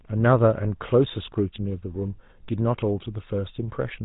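The speech has passed through the GSM full-rate codec from start to finish, which fits a 13 kbps bitrate. That coder models the vocal tract as a filter and feeds it a coarse, regularly spaced pulse excitation that keeps only a fraction of the original detail. Nothing is left above 3.8 kHz, so sibilants and brightness are gone. The coarse excitation gives the voice a plainly audible buzzy, gravelly roughness across the whole clip.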